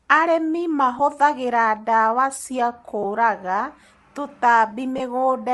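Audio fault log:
throughout: Bluetooth LC3 compression, likely the cause of a plainly audible grainy, breathy edge on the speech. Much of the upper spectrum is thinned out and filled with noise, which fits LC3 at around 48 kbps with 10 ms frames.
0.99, 3.03–3.05, 4.98–5.00: lost LE Audio frames. Brief smeared, noisy dropouts, each about 10 ms, the last about 20 ms. The decoder repeats the previous spectrum with scrambled signs, so the sound blurs instead of cutting out. This fits one or two missing 10 ms frames.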